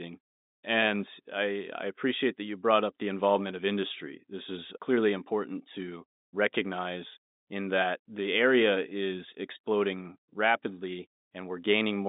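Nothing stood out on listening; the speech comes across as ordinary telephone audio, with the narrow line band and the faint coding hiss that G.711 telephone coding brings.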